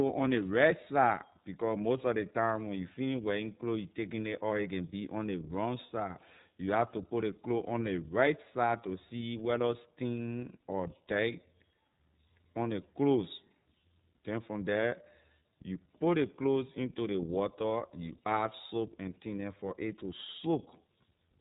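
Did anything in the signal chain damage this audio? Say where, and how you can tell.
Yes, the codec stage: iLBC coding runs throughout this speech, band-limited to about 3.8 kHz and audibly rough and synthetic. Each frame's excitation is coded independently, and the grain fits 30 ms frames at 13.33 kbps. A spectrogram shows a hard ceiling near 3.8 kHz.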